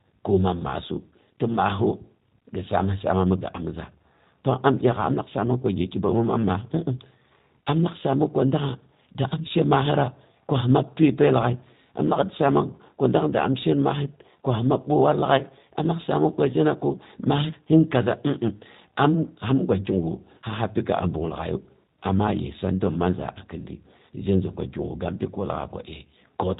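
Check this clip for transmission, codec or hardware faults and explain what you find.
One codec fault runs through the whole speech clip. G.729 codec damage: speech is rebuilt from a vocal-tract filter and sparse pulses, so it sounds rough and synthetic, consistent with 8 kbit/s. Plain band-limiting would only dull it.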